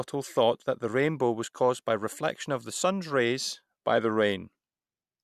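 No technical faults are audible anywhere in the speech recording.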